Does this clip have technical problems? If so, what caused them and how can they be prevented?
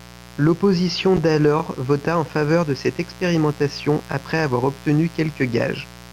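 Yes, there are two kinds of fault.

A steady, raspy buzz runs under the speech for the whole clip, at about 20 dB below it. This is mains buzz at 60 Hz. A dimmer, rectifier or poorly shielded cable lets sharp switching spikes into the signal twice per mains cycle, and those spikes spread harmonics of 60 Hz up into the kilohertz range. To prevent it, use shielded, properly grounded cabling and keep the recording chain away from dimmers and switching power supplies.

Brief stutters occur at 1.60 to 1.62 s, just before "vota en faveur de", and at 4.12 to 4.14 s, between "faveur de cette expérimentation" and "avoir obtenu". These come from overlapping chunks. The audio was handled in 2.5 s blocks, and each block began about 23 ms before the previous one ended, so that sliver plays twice at every join. To prevent it, set the chunking so that each block starts exactly where the last one stopped, or crossfade and trim any overlap when joining.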